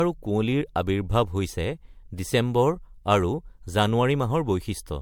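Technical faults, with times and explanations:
Throughout: generation loss, a swirly, smeared, hollow sound with blurred attacks, likely from about five successive MP3 re-encodes, each re-quantising on a new frame grid.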